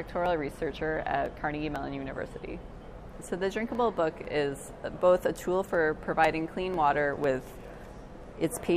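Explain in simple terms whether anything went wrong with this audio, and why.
Something did go wrong. From 0.26 s to 8.24 s there are periodic USB or driver dropouts: about fifteen ticks, one every 0.5 s, where roughly half a millisecond of sound is skipped. Unlike random clicks from damage, they keep a strict, regular beat.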